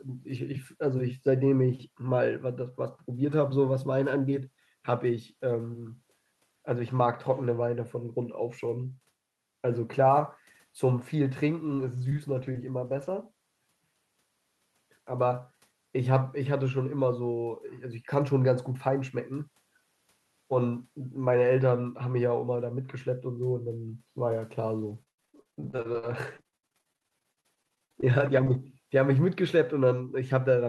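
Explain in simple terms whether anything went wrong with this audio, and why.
Between 11.65 and 13.09 s, many single lost packets, each about 20 ms, were rebuilt from error correction. A rougher backup copy travelling in the next packet filled each one, so nothing goes silent. The sound just turns briefly grainy and rough, not choppy.

At 12.09 and 12.52 s there is short concealed packet loss. About 20 ms arrived too late, so the receiver guessed by stretching the preceding sound. Listen for a tiny smear or wobble rather than the graininess around it.

From 24.83 to 28.56 s there is repeated packet loss, which gives a robotic sound. Audio went missing 39 times, with the longest gap at 96 ms. About 30% of that stretch is guesswork and roughly half a second came from backup copies. Because the gaps come close together, this part sounds choppy with pieces missing, unlike the isolated blips earlier.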